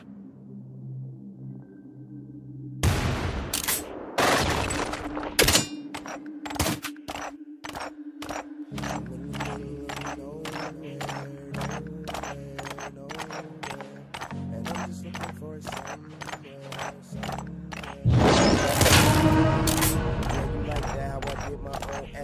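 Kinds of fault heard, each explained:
Doubled audio track: between 8.62 and 11.24 s a dry copy trails about half a second behind, a bit quieter, likely from a slower second capture path.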